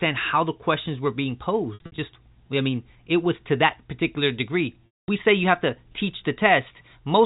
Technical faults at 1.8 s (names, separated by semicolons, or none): packet loss with pitch repetition